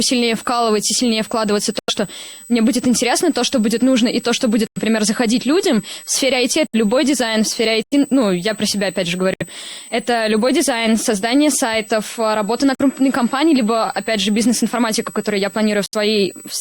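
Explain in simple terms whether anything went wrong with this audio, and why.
Yes, two things went wrong. A switching supply whistle runs throughout: a thin, high tone near 8 kHz that drifts slightly rather than holding steady, a sign of a power supply.

Corrupt frame muted: damaged chunks of compressed audio were thrown away and replaced by sudden silence at 1.79, 4.67, 6.67, 7.83, 9.34, 12.75 and 15.86 s. Each silence lasts about a tenth of a second or less, and the timing afterwards stays in step.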